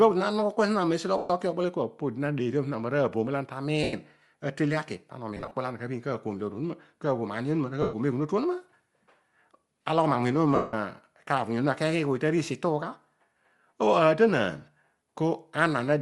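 Speech, with plainly audible codec damage throughout. The upper spectrum sounds thinned and filled with hiss, giving the voice a breathy, grainy edge. This is likely Bluetooth LC3 compression, the LE Audio transform codec, starved of bits. The character fits a bitrate near 48 kbps with 7.5 ms frames. Lost LE Audio frames then cause five dropouts. They fall at 1.17 to 1.30 s, 3.83 to 3.93 s, 5.37 to 5.54 s, 7.82 to 7.93 s and 10.55 to 10.74 s. Most gaps last about 0.1 to 0.12 s. The longest, at 10.55 s, runs 180 ms. The one at 5.37 s is broken up, spread over 165 ms in short runs, the longest around 30 ms. In each, the decoder repeats the last spectrum with scrambled phase. The concealed sound fades toward silence as the loss continues.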